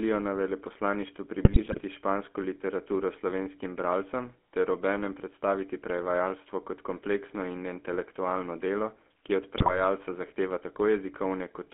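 Throughout, the GSM full-rate codec leaves a buzzy, gravelly texture, band-limited to 200 Hz–3.4 kHz, consistent with 13 kbps pulse-excited vocal-tract coding. From 1.44 to 1.82 s, after "na veleposlaništvu", and from 9.56 to 9.80 s, after "intelektualno delo ki od", GSM bit errors corrupt decoder parameters, causing squawks, pops and gargling level jumps.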